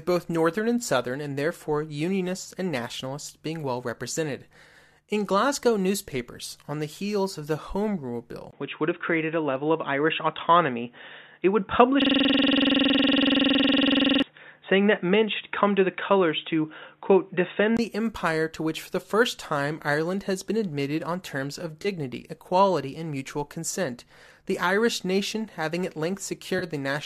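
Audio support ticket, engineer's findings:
Input switched to a poorer device, likely cause: 8.51–17.79 s. Top end gone above 3.8 kHz, dull boxy tone, level shifts by a few dB, new faint noise floor well below the signal, brief 20 ms gap at the switch. Band-limited second input path.

System hang loop: 12.02–14.22 s. One 46.44 ms piece repeats exactly, dozens of times, heard as a 21.5 Hz buzz-stutter. Driver or OS stall while hardware kept cycling the ring buffer. Loop length fits a 2048-sample buffer.

AAC frame loss with concealment: 21.82–21.87 s and 26.59–26.64 s. Short smeared, noisy patch of about 30 ms each, which fits three lost frames. Decoder concealment refilled the gap from the last good spectrum. Light coding, likely low-delay AAC, across the clip.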